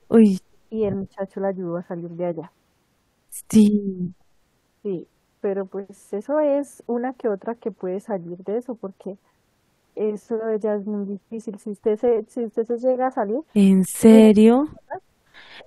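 At 0.02 to 0.06 s the room sound dips by about 14 dB. This is background gated by the echo canceller. The canceller heard its loudspeaker playing and pulled the microphone down hard to keep echo out. The room tone underneath went with it. The drop lasts only a few hundredths of a second. Then the canceller releases and the background returns at its normal level.

At 1.15 to 1.2 s the speech dips briefly, by roughly 15 dB. At 13.92 to 14.06 s it drops much deeper, by around 40 dB, nearly cutting out. From 14.26 to 14.97 s it falls away again by a similar depth, for about half a second. This is speech suppressed in double talk. The likely cause is both sides talking at once. The canceller could not tell the near talker from the loudspeaker echo, so it turned everything down.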